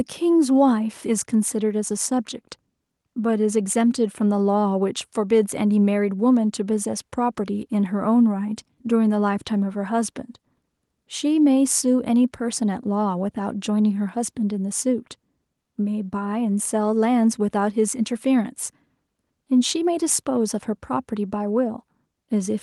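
Nothing stood out as a technical fault on listening through the speech recording.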